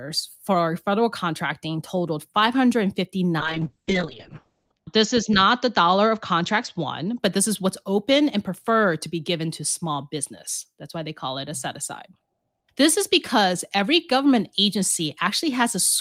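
A call bitrate drop runs from 3.4 to 7.25 s, ending just before "this is what's open". Starved of bits, the encoder codes coarsely and narrows bandwidth from 20 kHz to 8 kHz. Speech turns muffled and watery, worst for about 1.3 s, which fits a fall from 32 to 7 kbps.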